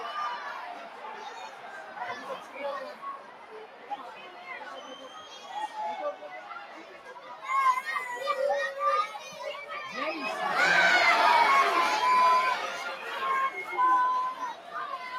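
A clip of everyday sounds runs through a speech-tuned noise suppressor for its whole length. The suppressor treats steady content and decaying tails as noise, so the level swings by around 10 dB and the sound pumps. On a waveform the envelope breathes irregularly, and on a spectrogram sustained bands fade while onsets stay bright. The sound cut by the noise suppressor sinks by about 4 to 6 dB at 0.77–1.05, 1.29–1.97, 2.38–2.56, 2.93–3.92, 4.15–4.47, 4.79–5.16, 6.15–7.37 and 14.54–14.75 s. These cuts show as clipped tails and darker patches after each attack.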